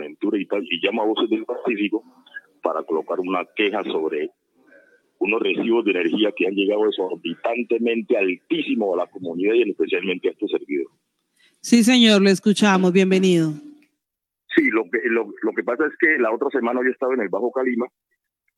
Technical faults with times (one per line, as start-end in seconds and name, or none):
none